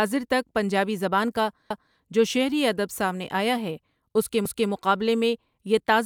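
Speech clip with overlapping chunks: right after "تک پنجابی زبان کا" (1.70–1.96 s) and "آیا ہے اس کے" (4.45–4.71 s), a 250 ms slice replays as a stutter, as 2.5-second chunks start early.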